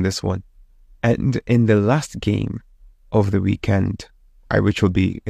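Speech recording with no audible technical faults.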